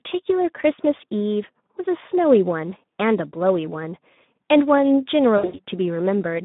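Throughout, the Speex codec starves its excitation of bits, consistent with a rate near 11 kbps, leaving speech hoarse, noisy and band-limited to 150 Hz to 3.7 kHz. From 5.37 to 5.59 s, VoIP packet loss concealed by the speech codec removes about 140 ms scattered over 160 ms, with runs up to 80 ms. The decoder stretches its last pitch into a fading buzzy tone or coloured noise, and the speech stays weak after packets return.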